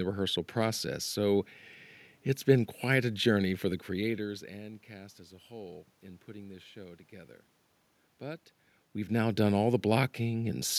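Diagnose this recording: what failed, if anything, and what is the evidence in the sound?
Nothing in the recording stood out as a failure on listening.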